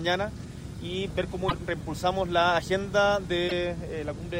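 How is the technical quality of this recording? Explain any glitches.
The recording has two brief glitches, at 1.48 to 1.53 s and 3.47 to 3.52 s. Each is a roughly 50 ms glitch where the sound skips ahead, likely a broken MP3 bit reservoir: after missing frames, about two 24 ms frames borrow stale data. On a waveform each shows a discontinuity, and a spectrogram shows a short vertical smear.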